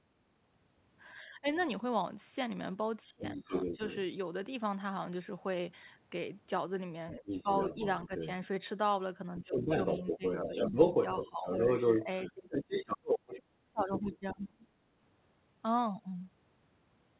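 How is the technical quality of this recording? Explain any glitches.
The recording has two recurring echo-control faults. The sound is narrowband throughout, with nothing above 4 kHz, which fits a G.711 telephone codec.

Speech suppressed in double talk occurs at 1.21–1.46, 3.03–3.8, 7.16–8.11 and 9.3–14.65 s. The speech dips by about 10 to 25 dB, deepest in the last stretch. The likely cause is the echo canceller ducking both voices together.

The other side's voice leaks through at 1.57–1.64, 3.25–3.97, 7.26–8.3 and 9.46–14.45 s. The residual echo was likely not removed, and it ranges from faint, about 25 dB down, to about 5 dB louder than the speech itself.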